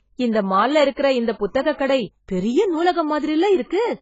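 Heavy AAC compression, likely AAC-LC at a low bitrate near 16 kbps, runs throughout the speech. The coder has discarded everything above 7.6 kHz and coarsely quantised what remains, so the whole clip sounds dull and muffled, with smeared, warbling detail.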